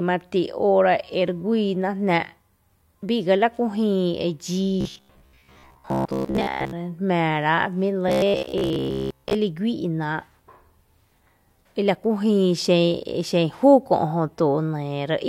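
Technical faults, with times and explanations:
4.81–6.73 s and 8.09–9.34 s, robotic sound from repeated short buffers: in both stretches the speech becomes a rigid, metallic buzz that still loosely follows the speech. The likely cause is audio arriving too slowly, so the playback fills gaps by looping a short fragment of about 15 ms while much of the real signal, roughly two-thirds, is dropped. That fixed loop imposes a steady pitch near 66.7 Hz.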